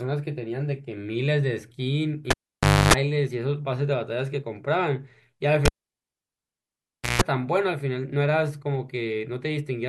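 At 2.31 s the cable is pulled and plugged in: a pop, then 0.58 s of near silence and a 0.28 s burst of 50 Hz mains buzz as the plug's tip makes contact before the sound returns with another pop at 2.93 s. The same happens from 5.65 to 7.22 s, with 1.51 s unplugged and a 0.15 s buzz at 60 Hz. The waveform shows spikes bracketing a flat gap, and the spectrogram shows stacked hum harmonics.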